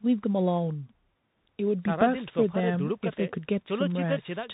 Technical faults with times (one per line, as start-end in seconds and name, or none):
0.00-4.53 Bluetooth CVSD headset codec